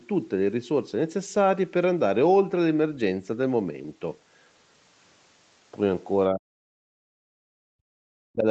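An echo canceller likely treated double talk as echo, so speech suppressed in double talk nearly cuts the voice, about 40 dB down, at 6.31–6.67 s and 6.85–8.46 s.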